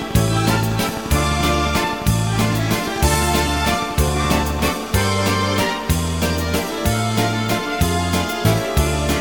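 From 0.02 s to 4.69 s a train of clicks ticks over the sound at a regular 11.6 per second, some fifty alike pulses peaking about 5 dB above the signal. Likely interference or a faulty connection; unlike random crackle, the pace stays even.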